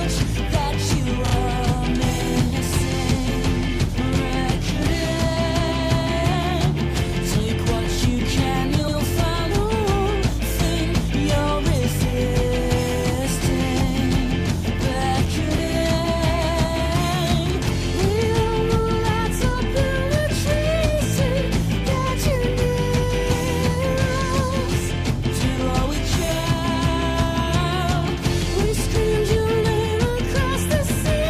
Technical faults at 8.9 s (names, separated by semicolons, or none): repeated frames